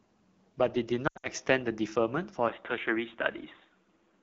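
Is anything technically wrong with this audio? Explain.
Yes, there are three problems.

All the way through, the speech sounds rough and raspy, with a grainy edge on every syllable. That is AMR wideband (HD Voice) codec damage. The coder models the voice with a pulse-driven vocal tract and fills the top band with shaped noise, and the roughness fits its 8.85 kbit/s mode, too low to keep speech clean.

From 1.07 to 1.28 s the sound wobbles, smears and briefly drops out, then returns weak and rough. These are lost AMR speech frames, about 140 ms missing across 160 ms, with the longest gap 80 ms. The decoder repeats its last good settings at falling gain, so the longer runs fade fast.

At 2.49 s the sound turns dull and boxy and stays that way to the end, with nothing above 3.8 kHz. There is no gap and hardly any change in level, and a faint new noise floor sits around 45 dB down. The likely cause is the input switching to a poorer device with a narrower band.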